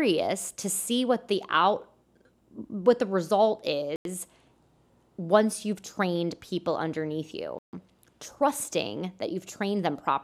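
After "what the result" at 3.96 s and "you've trained people underneath" at 7.59 s, the speech cuts to silence for 92 ms and 142 ms, then resumes. This is a likely Bluetooth stall, with the buffer running dry while delayed packets were resent.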